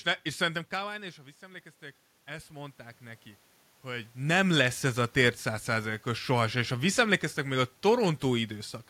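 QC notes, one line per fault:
0.37–1.74 s and 2.25–3.31 s, automatic gain rising: voice and room noise swell together by about 4 dB, the second ending before "hogy nem". The gain control is compensating an input drop of about 17 dB; the talker shifts near 0.5 s.
4.49–8.52 s, automatic gain falling: after "hogy nem", voice and room noise sink together by about 5 dB over roughly four seconds. The gain control is easing back on a loud input; the talker shifts near 4 s.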